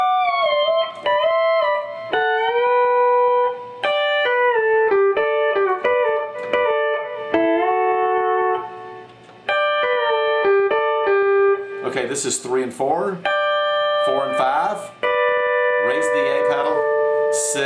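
No technical faults are audible.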